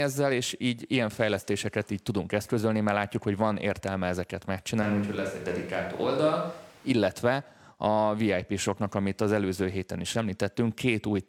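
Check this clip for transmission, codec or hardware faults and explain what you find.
One fault stands out: a switch to a distant microphone from 4.83 to 6.90 s, just after "hogy van értelme ezeket". The close microphone's feed likely dropped out, leaving a pickup further from the speaker. The speech abruptly turns roomy and hollow and loses bass, while its loudness barely changes. Room noise rises to roughly 30 dB below the speech. At 6.90 s the close, fuller sound returns just as suddenly.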